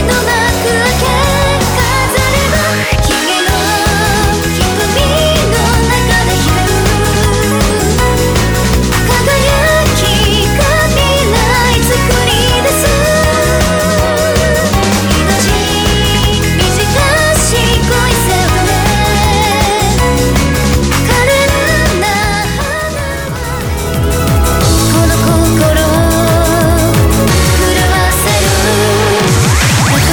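From 8.02 to 10.84 s the sound turns harsh and buzzy, and quiet stretches fill with noise. This is a stuck bit, likely one data line held at a fixed value, so about half the samples are displaced by a step of about -30 dBFS.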